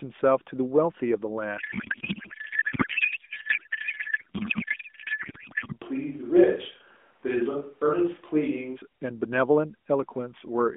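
A speech clip carried over a narrowband AMR mobile link, which confines it to roughly 200 Hz to 3.5 kHz. From 1.58 to 5.73 s, sender and receiver disagree on how the AMR bits are packed, most plausibly octet-aligned frames read as bandwidth-efficient. This codec payload misread turns the speech into garbled noise and warble that barely tracks it. Then from 5.84 to 8.75 s, the close microphone has likely dropped out in a switch to a distant microphone. The voice suddenly turns roomy and hollow, with thinner bass, a level about 5 dB lower and more audible room noise, before snapping back.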